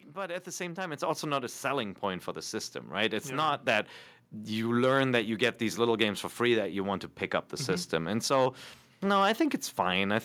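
The clip is speech with one fault: the microphone volume stepped up at 1.02 s, between "the same time it's" and "also not a selling". Voice and background jump together by about 6 dB. The call software judged the microphone too quiet and raised its input volume in one step.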